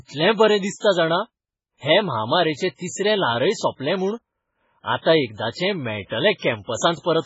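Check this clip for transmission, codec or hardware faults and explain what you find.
One fault runs through the whole clip, and it most likely comes from MP3 compression. The speech has nothing above 7.7 kHz, and the damage is heavy. That fits a bitrate around 16 kbps. With so few bits, the encoder cuts off the treble at a fixed point and discards weak frequency lines, which drop in and out from frame to frame. The result is a muffled, watery, swirling quality, with metallic chirps on s sounds and smeared consonant attacks.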